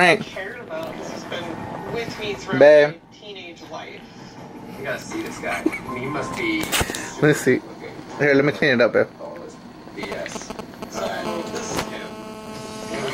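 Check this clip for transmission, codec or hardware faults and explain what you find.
Two bursts of phone interference show up near the end, both from a 2G handset sitting close to the gear.

From 10.03 to 11.08 s there are GSM signalling bursts: the phone's short radio bursts get rectified by the audio circuit, giving galloping ticks and brief 217 Hz buzzes, nearly as loud as the sound itself.

From 11.25 to 13.08 s it settles into GSM phone buzz, a steady call-mode transmission pulsing 217 times a second, heard as a raspy, harmonic-rich buzz about 12 dB below the sound.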